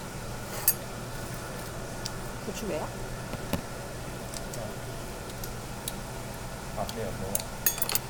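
No technical faults are audible anywhere in this recording of everyday sounds.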